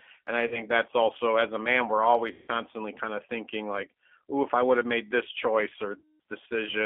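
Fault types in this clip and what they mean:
G.729 codec: The speech was carried over a low-rate CELP voice codec, which resynthesises each 10 ms frame from a vocal tract filter, a pitch predictor and a handful of pulses. The sound points to an 8 kbit/s G.729A link. The line band runs from 250 Hz to 3.4 kHz, so nothing above that survives and the low end is thin. The codec damage is plainly audible throughout as a rough, slightly synthetic grain.
VoIP packet loss concealed by the speech codec: Packets went missing, and the decoder filled each gap by extending its last pitch and filter settings while fading the gain. There are three gaps: 40 ms starting at 0.47 s, 160 ms at 2.32 s and 200 ms at 6.0 s. Each one sounds like a smeared, buzzy tone or coloured noise that fades. Because every frame builds on the one before, the speech stays weak or distorted until about 0.63, 2.51 and 6.20 s.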